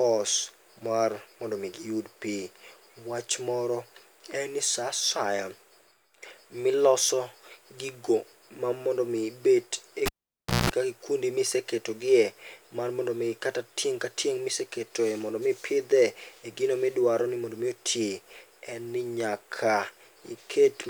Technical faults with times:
10.06-10.70 cable pulled and plugged in

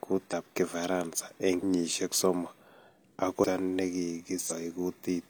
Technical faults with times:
0.28-0.34 compressed frames skipped
3.39-3.45 compressed frames skipped
4.46-4.52 compressed frames skipped

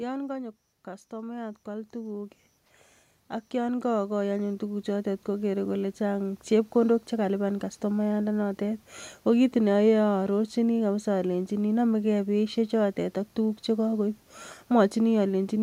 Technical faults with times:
1.10-6.48 automatic gain rising

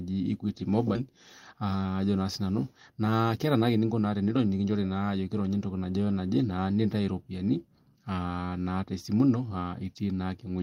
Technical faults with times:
0.95-0.97 skip ahead
2.90-4.00 jitter buffer speed-up

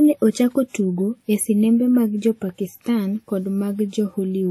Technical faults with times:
0.00-4.50 WMA compression

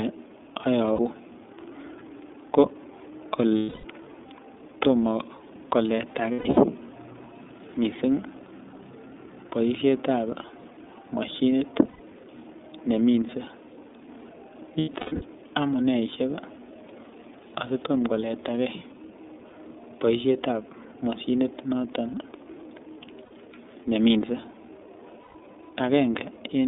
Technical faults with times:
0.00-26.68 iLBC codec
0.93-0.99 lost iLBC frames
3.57-3.85 lost iLBC frames
6.33-6.58 lost iLBC frames
11.88-12.00 lost iLBC frames
14.78-15.22 lost iLBC frames
23.25-23.31 lost iLBC frames
25.23-25.35 lost iLBC frames

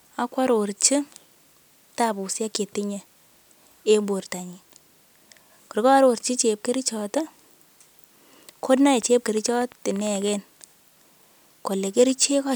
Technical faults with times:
8.78-10.29 train of clicks

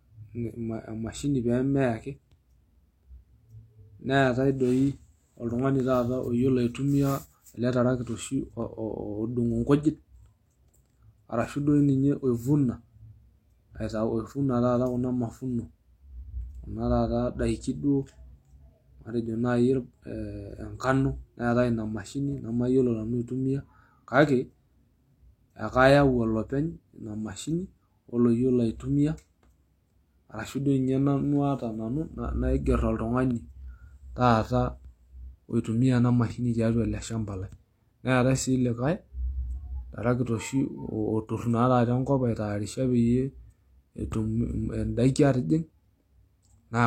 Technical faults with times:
9.83 pre-echo

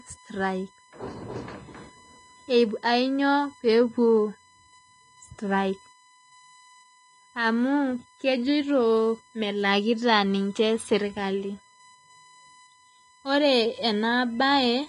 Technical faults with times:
0.00-14.89 USB whine
0.00-14.89 Vorbis compression

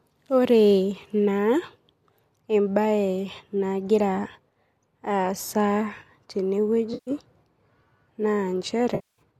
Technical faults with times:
6.93-7.11 AAC frame loss with concealment
8.95-9.21 AAC frame loss with concealment

